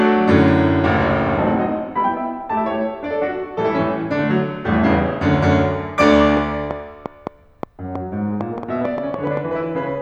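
From 6.37 s to 9.38 s a train of clicks rides over the music: roughly fifteen sharp, same-shaped ticks, averaging about 4.3 per second but spaced unevenly, so it sounds like stuttering popping rather than a steady tick. They jump out well above the music, around 10 dB hotter at their peaks. The cause is likely interference from nearby gear or a faulty connection or power supply, injecting a pulse every so often.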